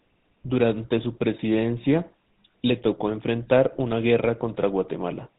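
Speech runs through the GSM full-rate codec from start to finish, and the damage is plainly audible. The codec models the vocal tract and excites it with a sparse, regular pulse train, keeping only one excitation sample in three. That coarse excitation gives the voice a buzzy, gravelly roughness. Nothing above 4 kHz gets through, so the sound is dull and narrowband. The texture fits the original 13 kbps GSM rate.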